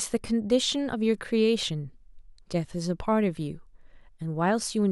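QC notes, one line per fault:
No faults heard in this speech clip.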